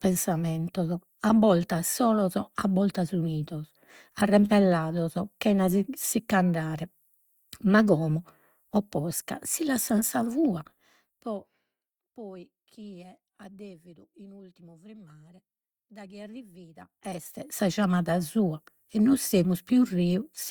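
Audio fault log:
16.73–17.70 s, zipper noise, just after "in ultimu frimmare daghi": the level shifts by about 25 dB in roughly a hundred unsmoothed steps per second, and each step clicks, which together makes a buzzy zipping sound.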